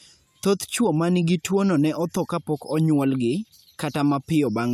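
No technical faults can be heard anywhere in the speech.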